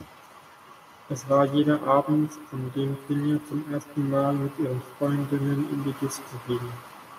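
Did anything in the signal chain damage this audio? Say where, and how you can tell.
Yes. The damage sits at the call-processing stage: echo with no canceller, present from start to finish. Every phrase is trailed by a faint copy, about 19 dB down, arriving roughly 150 ms later. It sounds thinner than the original. The far end's loudspeaker fed its microphone, and nothing subtracted that path before sending it back. On a spectrogram each syllable's harmonic stack reappears as a dim, offset ghost, and the waveform shows small repeated envelopes behind each burst.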